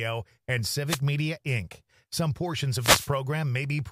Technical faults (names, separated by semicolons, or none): wireless microphone noise hit